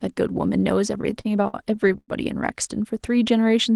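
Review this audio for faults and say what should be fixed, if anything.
Repeated stalls (stutter) run from 1.01 s to 2.1 s. The speech halts a dozen times in that stretch. Each halt is bridged by stretching the last sound, and the longest lasts about 102 ms. Together the fills add up to 286 ms, roughly a quarter of the span. Nothing is lost, but the speech drags and judders. Packets were arriving late or too slowly, so the jitter buffer kept running dry. A deeper adaptive jitter buffer and a steadier network path would prevent this.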